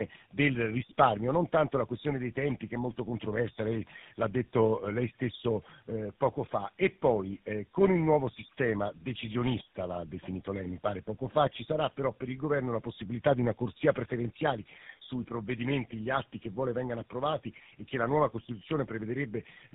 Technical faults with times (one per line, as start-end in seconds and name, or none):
0.00-19.74 tandem speech coding